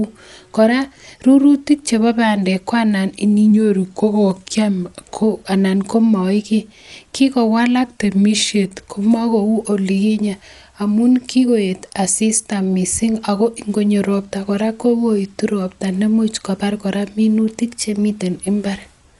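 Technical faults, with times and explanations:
Throughout: Dolby Digital compression, likely. The speech sounds dull and coarse, with nothing above about 11.5 kHz, which fits a low bitrate around 64 kbps. Lines the encoder starved of mantissa bits are filled with dither noise, so there's a rough, fluttery haze around tonal parts.
3.51–5.23 s and 7.84–8.74 s: drift correction step. Playback suddenly runs about 5.8% slow, dropping pitch roughly a semitone (about 104 cents) before snapping back, the first ending just before "anan komoi kii". This is likely clock-matching software adjusting rate to refill its buffer.
17.61–18.22 s: drift correction step. Just after "robta nemuch kobar kora", playback jumps about 5.8% fast, lifting pitch close to a semitone (about 98 cents), then returns. Speed and pitch move together because the resampling rate was likely stepped to drain a buffer.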